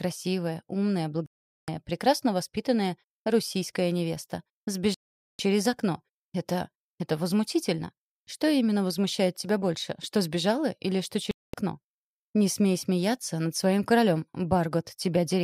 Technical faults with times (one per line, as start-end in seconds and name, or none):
1.26-1.68 digital broadcast dropout
4.94-5.39 digital broadcast dropout
11.31-11.54 digital broadcast dropout